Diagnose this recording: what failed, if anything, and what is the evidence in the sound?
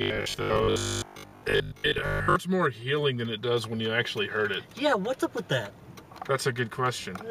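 Robotic sound from repeated short buffers, 0.02 to 2.36 s: a rigid 50 Hz buzz, likely the driver or buffer stage looping 20 ms blocks; the waveform shows roughly repeating segments.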